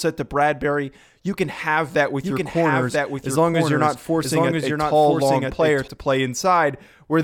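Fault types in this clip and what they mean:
Doubled audio track: a full-band copy trails about a second, around 5 dB quieter, starting abruptly without echo decay, likely from a second capture path.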